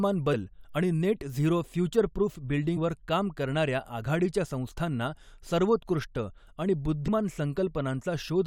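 At 0.33 s, just before "आणि नेट झिरो", damaged data in the compressed stream makes a short glitch as the decoder loses sync; the spectrogram shows a brief broadband smear. From 1.59 s, right after "आणि नेट झिरो", to the end, a channel delay of about one sample causes comb filtering when summed to mono. This dulls the top end, with a notch near 20 kHz. Similar blips from damaged data recur at 2.76–2.78 s and 7.07 s, each a thin vertical streak on the spectrogram.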